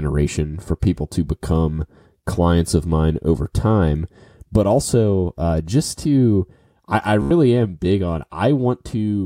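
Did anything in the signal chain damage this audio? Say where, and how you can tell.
Yes. A Bluetooth stutter hits the wireless link at 7.22 to 7.31 s, between "just to I I" and "am big on". For about 87 ms the receiver ran out of fresh data and kept replaying its last short buffer, so a tiny slice of speech repeats as a rapid buzzing stutter. That span fits roughly six lost packets. When data returns, the speech picks up further along, as though it had kept playing through the gap.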